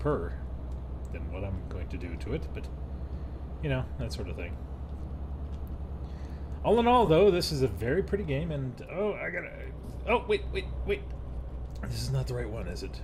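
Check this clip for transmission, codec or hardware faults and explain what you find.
One transmission fault is audible: lost LE Audio frames. From 7.06 to 7.08 s, about 20 ms of the Bluetooth LE Audio stream goes missing. That fits two 10 ms frames. The LC3 decoder covers the gap by replaying the last good spectrum with randomised signs. The frequency content stays roughly in place but its phase is scrambled. The result is a brief noisy smear where the sound loses its clarity. The gap is too short to fade into silence.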